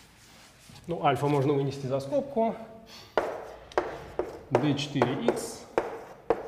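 No technical fault can be heard anywhere in this audio. Nothing in the sound points to a problem with how it was captured, processed or delivered.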